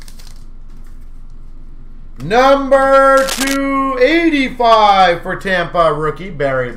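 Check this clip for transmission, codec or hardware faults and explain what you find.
One hardware fault is audible: a burst of cable scratch noise from 3.17 s to 3.56 s. For that stretch a dense, irregular crackle and rustle sits over the sound, roughly 10 dB below it. The likely cause is a worn cable, connector or control being moved, so that its contact resistance jumps rapidly and injects uneven noise bursts into the signal. It stops once the contact settles.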